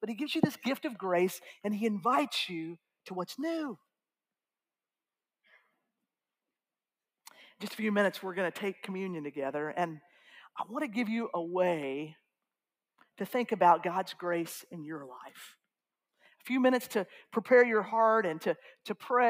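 Sound cut by the noise suppressor occurs from 16.14 to 16.43 s in this audio clip. The suppressor misjudged the material in that span as background noise and pulled its gain down harder than the surrounding audio, so the level sinks, by about 18 dB at the deepest point, across around a fifth of a second before recovering. The result is a brief dip where the sound sinks in level.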